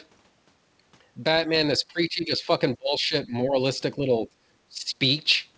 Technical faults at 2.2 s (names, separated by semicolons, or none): speech suppressed in double talk